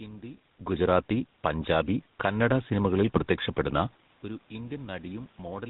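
The whole clip passes through the GSM full-rate codec. It rebuilds the vocal tract from a coarse, pulse-driven excitation and cuts everything above 4 kHz. The damage is plainly audible. The speech sounds buzzy and gravelly, with a dull top end, which fits the 13 kbps GSM rate.

From 0.6 s to 5.13 s the automatic gain rises. The gain control judged the input too quiet and slowly turned it up by about 6 dB. Voice and room noise swell together. This is separate from the talker's own level shifts near 0.5 s and 4 s.

At 3.16 s to 3.23 s there are GSM bit errors. Corrupted bits reached the decoder and spoiled its filter, pitch and gain values. The voice briefly squawks and gargles. The burst lasts about 70 ms, which fits roughly three damaged frames.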